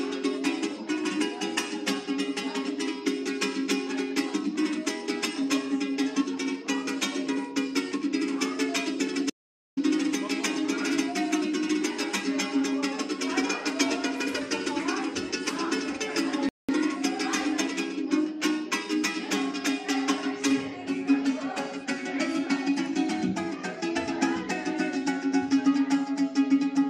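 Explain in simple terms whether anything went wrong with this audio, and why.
Two things go wrong. From 9.3 to 9.77 s there is an audio dropout to silence. The sound cuts off mid-flow into dead silence, with no background hiss at all, for just under half a second. It likely comes from the input briefly disconnecting or muting. Whatever happened in that gap is simply missing.

At 16.49 s there is a rebuffering stall. The sound stops for about 0.2 s and then picks up exactly where it left off, because playback paused waiting for more data. Unlike the dropout, nothing is skipped; the clip just runs slightly longer.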